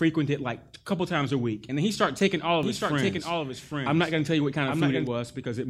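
From 2.63 s, just after "he started taking all", the speech is joined by a second copy of itself trailing roughly 0.7 s behind and around 5 dB quieter. It has no reverb tail or room colour, and it cuts in and out abruptly, stopping at 5.07 s. This doubled audio track is likely the same signal arriving twice, once through a slower capture path or from an edit holding two misaligned copies.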